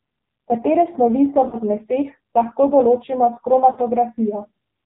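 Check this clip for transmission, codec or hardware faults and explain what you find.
Two faults are present: heavy narrowband mobile-codec coding across the whole recording, and two short dropouts from lost speech frames.

AMR narrowband mobile codec, throughout: the speech was squeezed through AMR-NB, which samples at 8 kHz and rebuilds the voice from a vocal-tract filter excited by a handful of pulses per subframe. Nothing above 4 kHz survives, so consonants sound dull and boxy. The damage is heavy: a buzzy, synthetic voice, which fits one of the codec's low modes, around 5.9 kbps.

Lost AMR speech frames, at 1.48–1.57 s and 3.72–3.79 s: frames arriving corrupted were discarded, and the decoder filled each gap by repeating its last good pitch and filter settings at falling gain. The first gap falls just after "snovi so" and before "zmeseh lahko določimo s". The second comes just after "zmeseh lahko določimo s". 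Each is a brief warbling dip of about 40 ms, consistent with two consecutive 20 ms frames, followed by a weak or rough restart for a moment.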